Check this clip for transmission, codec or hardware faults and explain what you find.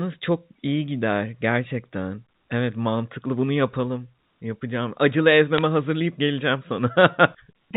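One transmission fault is present, heard over the G.711 telephone coding, which cuts everything above 4 kHz. Bit errors on a digital phone line: from 5.58 to 5.62 s, just before "hazırlayıp geleceğim", bit errors break through the speech. A few bits per thousand flipped there, each corrupting a single sample.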